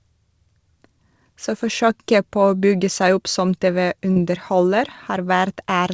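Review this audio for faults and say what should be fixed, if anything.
Short concealed packet loss at 4.12 to 4.18 s: about 40 ms of the speech reached the decoder too late. The receiver extended the preceding sound across the gap and blended back into the real audio, leaving a brief smear in that spot. The call path carries nothing above 8 kHz, which fits a G.722 codec at 64 kbps. More jitter-buffer headroom or forward error correction on the call link would prevent the dropout.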